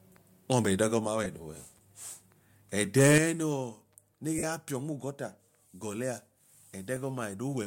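A speech clip with three kinds of fault. Lost LE Audio frames cause brief gaps at 1.24–1.26 s (about 15 ms), 4.38–4.43 s (about 45 ms) and 6.96 s (about 7.5 ms). Unlike a clean dropout to silence, each gap is filled with a noisy smear, because the LC3 decoder repeats the last spectrum with scrambled phase. From 2.97 to 3.18 s the loudest syllables take on a harsh, crackling edge, heard only on those peaks rather than spread across the sound as codec distortion would be. This is microphone overload, likely from input gain pushing peaks roughly 6 dB past the converter's limit, flattening a small share of samples. Immediately after, at 3.18 s, the microphone volume is stepped down: voice and background together drop by about 8 dB in a single abrupt step, not a gradual fade, likely the call software cutting input gain in response to the clipping.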